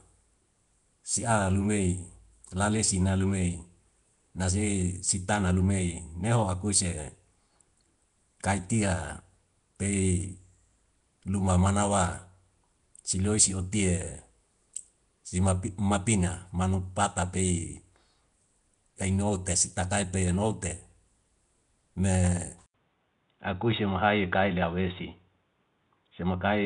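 From the start, the speech carries audible Nellymoser compression, likely from the Flash-era Asao codec at a rate that fits about 44 kbps. Coarse two-bit coding and noise-filled empty bands give a rough, hissy, underwater smear. On a spectrogram, content stops sharply at 10.7 kHz, with speckled noisy texture in weak bands.

At 22.66 s the input switched to a poorer device, likely a headset call profile or another microphone, marked by an 80 ms silence that shows as a flat gap in the waveform. To the end the speech turns dull and boxy at much the same loudness, with the spectrogram now empty above 3.8 kHz and a faint new noise floor far beneath the speech.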